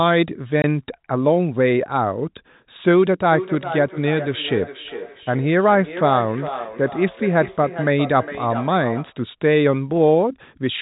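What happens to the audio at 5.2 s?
At 5.2 s the clip is inside a stretch of feedback echo between two devices that runs from 3.32 s to 9.19 s. A second device in the same room plays back what the first microphone sent, the microphone picks it up again, and neither echo canceller removes sound it did not play itself. The speech returns roughly every 400 ms, thin and ringing within the telephone band, with the loudest repeat about 11 dB below the direct speech.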